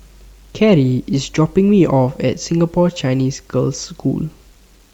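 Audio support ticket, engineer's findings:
Grainy, gritty distortion across the whole speech clip, tracking the level, quiet tails sputtering or dropping out. Likely low bit depth without dither: truncation to about 9 bits, leaving signal-correlated error around 40 dB below the speech.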